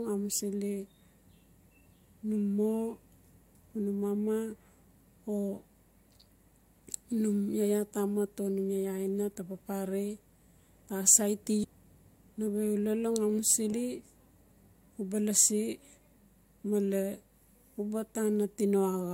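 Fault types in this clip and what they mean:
Damaged data in a compressed stream: part of the encoded speech got mangled, so the decoder misreads those frames and has to hunt for the next valid header. You hear it as two quick glitchy blips, around 11.63–11.65 s and at 13.72 s.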